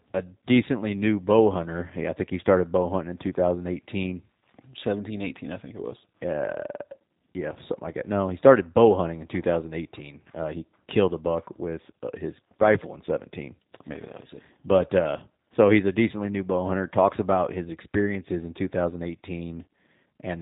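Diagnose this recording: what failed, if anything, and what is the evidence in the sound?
Throughout, the speech sounds band-limited, with nothing above about 3.8 kHz, and has a rough, slightly synthetic texture. That points to the codec stage: the G.729 codec, likely the G.729A variant, fits an 8 kbit/s coder rebuilding each frame from a vocal-tract model and sparse pulses.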